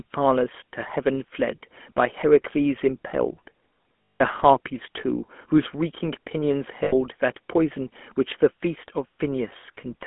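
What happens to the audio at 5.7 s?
At 5.7 s you're hearing the GSM full-rate codec, which runs the whole clip: pulse-driven vocal-tract modelling gives buzzy, gravelly speech, band-limited to roughly 200 Hz–3.4 kHz.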